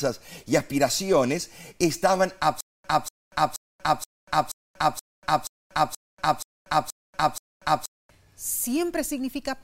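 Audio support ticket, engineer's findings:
Stutter with silent gaps, 2.61–8.10 s, right after "y aspiraciones estaban": a 241 ms speech fragment repeats 11 times, each followed by about 237 ms of digital silence, on a steady 477 ms cycle. Speech due in that span is lost. Likely a player or stream stall, with each retry replaying the last buffered fragment and then running empty.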